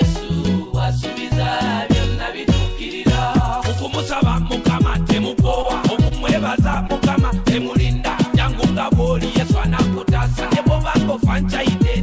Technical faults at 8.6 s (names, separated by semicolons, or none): none